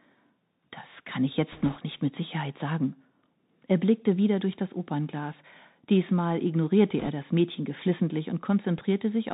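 Throughout the recording the speech carries the sound of the Bluetooth CVSD headset codec, and the damage is plainly audible. The band stops at 4 kHz, consistent with a 64 kbps CVSD link sending one up-or-down bit per sample. The adaptive step size cannot keep pace with fast, loud high-frequency content, so sibilants come out scratchy and a fine granular hiss sits beneath the speech.

From 1.52 to 1.77 s, between "kann ich" and "nicht mit", there are bit errors on the Bluetooth voice link. Flipped bits in a CVSD stream each shift the output by only one small step, and the error decays, so there are no sharp clicks. The sound is a rushing, crackling noise over the speech, which fits an error rate of around 3 percent. A second burst of bit errors runs from 6.99 to 7.10 s. It is slightly denser, at about 4 percent, and the crackle is correspondingly a little rougher over that short stretch.

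At 8.78 to 8.80 s a single loud pop cuts through, peaking about 5 dB above the surrounding signal. A sudden voltage step from a connector, switch, static discharge or driver glitch is the likely cause. The following circuitry shapes it into a short, sharp transient, and the speech continues underneath without interruption.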